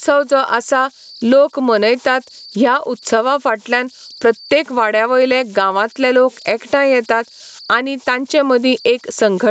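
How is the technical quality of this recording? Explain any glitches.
The recording has two faults that run through the whole speech clip. A thin whistle sits underneath it, and the level keeps surging and collapsing. Both are heard through an Opus call path that leaves nothing above 8 kHz.

Converter idle tones are present from start to finish, at about 31 dB below the signal. When the input is very small, an undithered delta-sigma converter settles into repeating bit patterns. Here those patterns produce a faint tone around 5 kHz, which whistles in the pauses and turns grainy under quiet syllables. It differs from mains hum or a steady interference whine because it depends on the signal. It is only exposed when the level drops, and it is hidden once loud sound fills the converter.

Gain pumping also affects the whole clip, with the level swinging by around 15 dB. The loud and soft passages are flattened toward one level, so the sound comes across as squashed. 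The likely cause is input gain set far too high, with a fast limiter clamping it down on each loud sound. It differs from slow automatic gain drift because the swell and duck are tightly locked to each loud onset instead of wandering over seconds.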